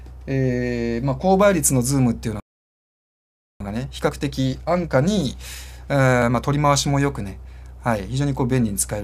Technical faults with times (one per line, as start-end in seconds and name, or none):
2.40-3.60 playback stall
3.60-6.60 time-compressed catch-up